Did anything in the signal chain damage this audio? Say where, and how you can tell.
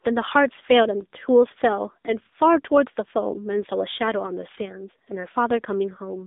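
Yes. At the codec stage, the AMR narrowband mobile codec runs throughout: a flat spectrogram ceiling at 3.8 kHz and buzzy, synthetic speech, which fits a low rate near 8 kbps.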